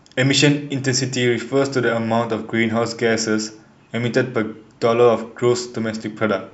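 No technical faults can be heard anywhere in the recording.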